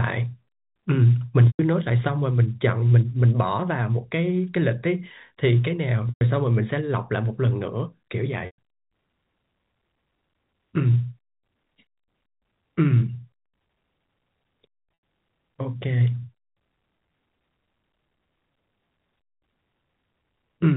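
Packet loss with pitch repetition occurs at 1.47–1.59 s, 6.09–6.21 s and 8.46–8.58 s (120 ms each), then at 14.94–15.03 s (90 ms). In each gap, the receiver loops the last pitch period, giving a brief buzzy hold that fades to silence within about 50 ms before speech cross-fades back in over the G.711 telephone band. That smooth decaying buzz distinguishes it from a hard dropout's abrupt silence or a stutter's repeated syllables.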